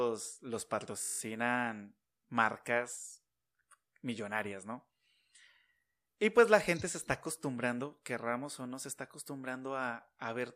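System hang loop from 1.02 to 1.2 s: the driver stalled while the hardware replayed one 20 ms buffer nine times, producing a steady 50 Hz buzz.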